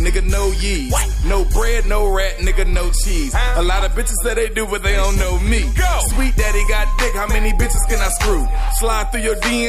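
Nothing stood out on listening to the recording.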